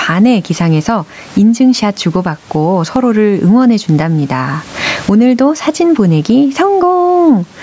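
Gain pumping runs through the whole clip, with the level swinging by something like 15 dB. Loud and quiet passages sit close together, so the speech sounds squashed. The likely cause is input gain set far too high for the microphone, with a fast limiter or compressor clamping down on each peak. The room noise sits about 38 dB below the speech.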